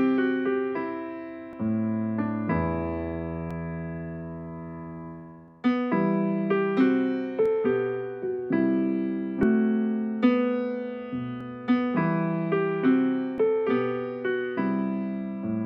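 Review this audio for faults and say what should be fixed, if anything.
Seven short skips occur at 1.53, 3.51, 5.48, 7.46, 9.43, 11.41 and 13.38 s, spaced just under 2 s apart. At each one, around 30 ms of sound vanishes and the audio on either side is butted together with no gap. The steady spacing points to audio missing between chunks: the recorder or processor likely handles the signal in 2-second blocks and drops a slice each time it closes one block and starts the next. To prevent it, use overlapping or double-buffered chunk handling so the next block is already capturing before the current one is finalised.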